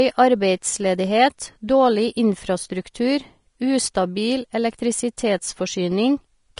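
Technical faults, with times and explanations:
Throughout: likely Vorbis compression. Nothing comes through above 10.5 kHz, and the treble below that is plainly grainy and hissy. That fits a low bitrate around 35 kbps, where the codec replaces fine high-frequency detail with noise of similar energy.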